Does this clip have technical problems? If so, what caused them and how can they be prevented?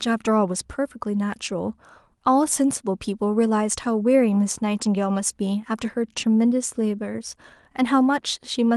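No, there's nothing wrong with this one: it's speech that came through an ordinary call connection, and the top end rolling off around 12 kHz is just what you'd expect from an Opus call path working as it should, so there's nothing to fix or prevent.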